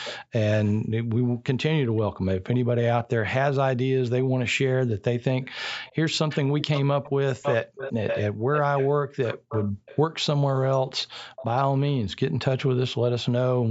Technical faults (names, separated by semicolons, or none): echo leak; Bluetooth stutter